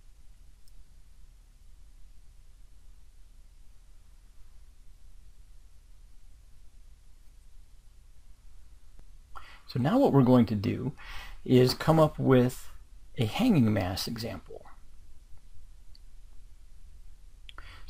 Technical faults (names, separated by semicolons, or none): none